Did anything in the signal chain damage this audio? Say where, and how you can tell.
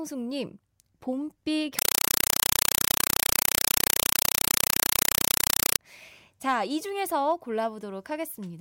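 Yes: compressed stream played as audio, 1.79 to 5.79 s, at the playback link. Loud 4 ms noise bursts repeat 31.25 times a second, which fits undecoded AC-3 data.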